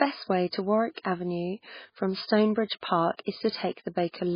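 A speech clip, likely starved of bits by MP3 compression at a very low bitrate such as 16 kbps: nothing survives above 5 kHz, and heavy watery, swirling artefacts smear the sound throughout.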